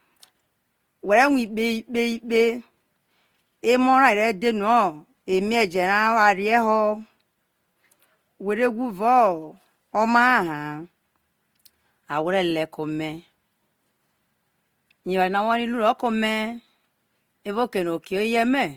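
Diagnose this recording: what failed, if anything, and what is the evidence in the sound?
Opus compression throughout, codec stage: the speech turns grainy and rough up to 20.3 kHz, likely CELT-mode coding near 24 kbps noise-filling starved bands.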